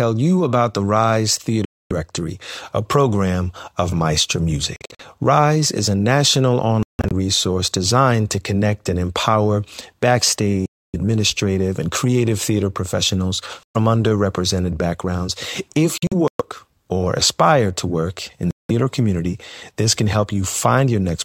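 Bluetooth dropout, seven times, at 1.65–1.92, 4.76–5.01, 6.83–7.13 (after "is a national"), 10.66–10.96, 13.63–13.76, 15.98–16.42 and 18.51–18.71 s (after "aspire to work in"). Sound vanishes, likely because wireless packets arrived too late and were dropped. Silence of 116 to 279 ms, in scattered gaps at 4.76, 6.83 and 15.98 s, until playback resumes further along.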